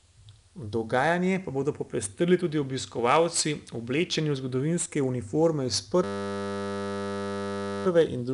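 From the start, the two channels are drifting apart: their clocks differ by something like 70 ppm, so the inter-channel delay creeps up to under half a millisecond by the end. Summed to mono, comb notches sweep slowly downward, giving a slow flanging on the speech.

Throughout, 4-bit ADPCM compression is plainly audible. Each sample is coded as a coarse step from a prediction, leaving a gritty, level-following hiss on louder syllables and roughness on sharp attacks. Nothing is present above 10.6 kHz, and the rate fits roughly 88 kbps.

From 6.04 to 7.86 s a system hang loop takes over. The output keeps replaying the same 10 ms buffer while the host is frozen, so the sound becomes a steady 100 Hz buzz for nearly two seconds. Essentially no audio is dropped around it.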